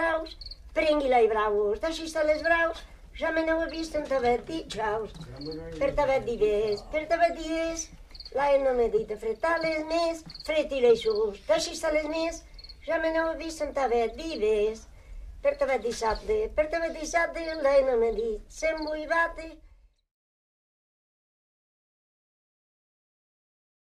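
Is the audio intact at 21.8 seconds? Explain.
Yes, the audio is intact at 21.8 seconds, with no fault at that moment.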